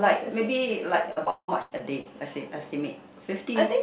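From 1.12 to 2.07 s there's repeated packet loss. Six holes, the longest 178 ms, get patched with stretched-out sound, so that stretch turns choppy and robotic. The whole clip tops out at 4 kHz, which fits a G.711 call path.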